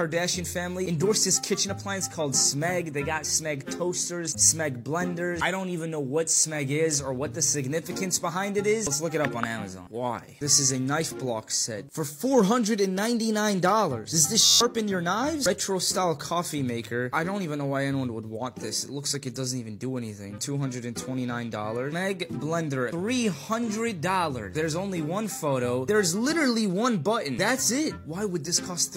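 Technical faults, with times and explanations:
14.45–14.61 s, system hang loop: the system stalled while the audio hardware kept replaying its ring buffer. One 11.61 ms fragment repeats 13 times, producing a steady buzz at 86.1 Hz in place of about 150 ms of sound. The loop length fits a 512-sample buffer.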